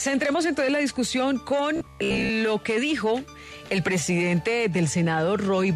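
From 1.76 to 2.30 s the audio turns to a robotic sound from repeated short buffers, a rigid buzz near 66.8 Hz, likely from repeating about 15 ms of stale audio, unlike a dropout's silence.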